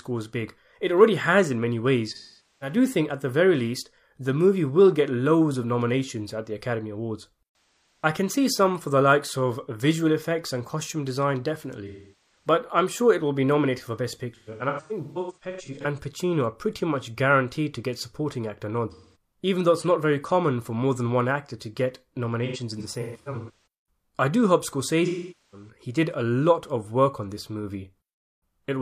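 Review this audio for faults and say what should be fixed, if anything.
AAC frame loss with concealment: AAC frames were dropped, and the decoder filled each gap from the last good spectrum, so the speech turns smeared, noisy and phasey. This happens at 2.11 to 2.76 s, 8.04 s, 11.87 to 12.47 s, 14.35 to 15.85 s (scattered short runs), 18.91 to 19.15 s after "to get supporting actor", 22.45 to 23.50 s after "one actor to get" (scattered), and 25.06 to 25.69 s after "I do hope".

To prevent it, protect the stream with forward error correction or a retransmitting transport and an adequate jitter buffer so frames reach the decoder intact.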